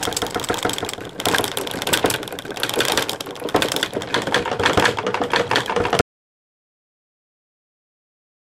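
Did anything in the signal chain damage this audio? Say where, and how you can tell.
Yes. At 6.01 s the sound cuts off abruptly into dead digital silence with no room tone, and it stays silent to the end of the clip. This is an audio dropout to silence, most likely from the input device or its link failing while the recorder kept writing silence.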